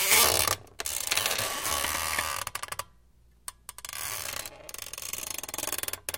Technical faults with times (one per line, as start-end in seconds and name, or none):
0.56-1.95 processor overload crackle